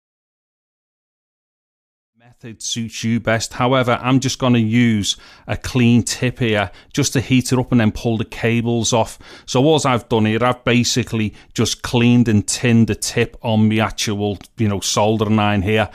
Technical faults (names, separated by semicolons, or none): none